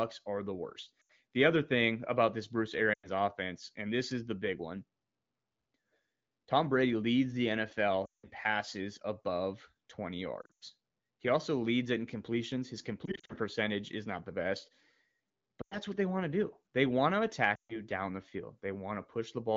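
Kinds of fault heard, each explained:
Lost AMR speech frames: radio errors corrupt speech frames, so the wideband decoder repeats the last good pitch and vocal tract settings at falling gain. Seven dropouts of 80 to 180 ms each drop the speech quickly to near silence, longest between "leads the" and "passes above".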